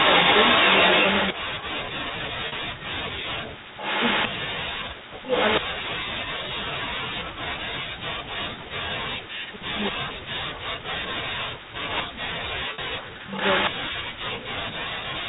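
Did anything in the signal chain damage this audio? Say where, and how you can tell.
Yes. At the far end's call processing, the echo canceller likely let loudspeaker sound leak back into the microphone. This echo leak appears as a delayed copy trailing by 232 ms at 0.0–1.33 s, 3.74–4.28 s, 5.23–5.6 s, 9.83–9.91 s, 11.88–12.03 s and 13.32–13.71 s. It ranges from about 5 dB above the speech to about 10 dB below it.

Also in call processing, the echo suppressor likely mistook the talker for echo while both sides spoke. This speech suppressed in double talk spans 1.33–14.74 s and affects roughly ten seconds in total. The speech dips, thins and drops out in pieces, at worst by around 40 dB.

On the network, packet loss with pitch repetition bridged two 40 ms gaps, at 2.48–2.52 s and 12.74–12.78 s, which fits two lost 20 ms packets each time. The receiver looped the last pitch period, so each gap sounds like a brief, buzzy held tone before normal speech returns.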